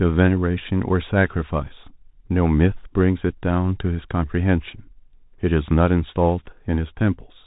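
Bluetooth CVSD headset codec throughout: one-bit delta coding at 64 kbps, which fits a Bluetooth headset link, cuts everything above 3.8 kHz, leaving scratchy sibilants and granular hiss.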